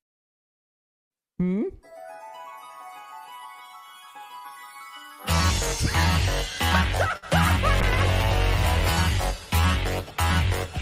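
Around 7.17 s there's a short stall from a late packet: the jitter buffer ran dry, so the last sound gets held for roughly 50 ms, then resumes with nothing lost. From 7.82 s to the end, a call bitrate drop from 64 to 22 kbps makes the encoder code coarsely, leaving the audio rougher and duller.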